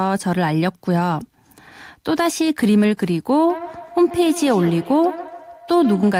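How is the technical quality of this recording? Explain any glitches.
The recording has one problem, in its last stretch. From 3.49 s to the end there is feedback echo between two devices. A second device on the same call is replaying this microphone's signal, and the microphone picks it up again. Its echo canceller only removes sound from its own loudspeaker, so the returned copy passes through. The speech comes back roughly every 150 ms, peaking at about 14 dB below the direct sound. Room reverberation would give a smooth decaying tail instead of discrete repeats at a fixed spacing.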